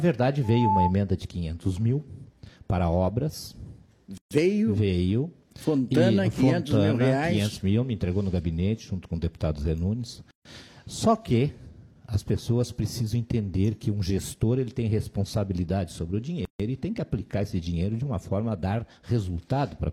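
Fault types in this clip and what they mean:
Loudspeaker feedback squeal: a mic-to-speaker loop runs away at 869 Hz, swelling over roughly a third of a second from 0.43 s; spectrogram shows one bright horizontal line.
Gap at a join of encoded pieces: separately encoded segments spliced with their silent padding intact, leaving gaps of 131 to 144 ms with smeared edges at 4.18, 10.31 and 16.45 s, every 6 s.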